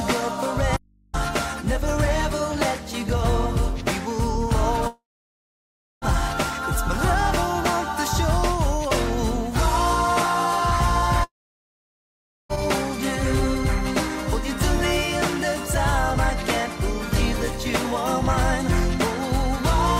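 Right near the start, from 0.77 to 1.14 s, there's an audio dropout to a faint residue: the sound cuts out abruptly for about 0.37 s, and all you hear in the gap is hum sitting roughly 35 dB below the normal level before it snaps back. That's not a pause or a fade. It's likely the signal feed breaking while the input stayed live and picked up mains hum. Later come two long network dropouts, at 4.87 to 6.05 s and 11.24 to 12.52 s. In each, the last bit of sound gets stretched into a short fading buzz or hiss, then goes quiet for about 0.99 s and 1.18 s respectively. When the audio returns, roughly 1.14 s and 1.26 s of material are simply gone. That points to packets likely not arriving for over a second while the receiver tried to conceal the gap before giving up.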